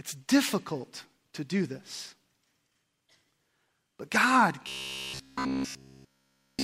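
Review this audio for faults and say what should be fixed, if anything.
Audio likely stopped arriving in time from 4.69 s to 6.63 s, so playback kept looping a short buffer, which fits one about 15 ms long, instead of fresh material. This is robotic sound from repeated short buffers: the speech collapses into a rigid, metallic 66.8 Hz buzz across essentially all of that stretch. To prevent it, give the audio path enough buffering headroom and scheduling priority that each new block arrives before the previous one runs out.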